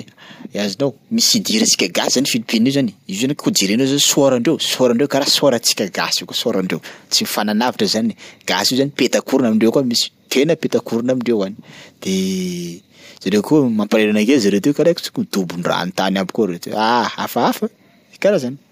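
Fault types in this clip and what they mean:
There are no fault types in this clip.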